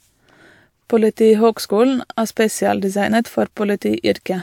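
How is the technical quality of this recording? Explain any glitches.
No audible glitches or faults.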